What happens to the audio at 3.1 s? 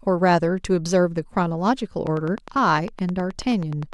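At 3.1 s the speech sits under a steady ticking, part of a train of clicks running from 2.07 s to the end, about 20 evenly spaced pulses at 9.68 per second, peaking about 5 dB above the speech. Nearby electrical interference or a faulty connection or power supply is the likely cause.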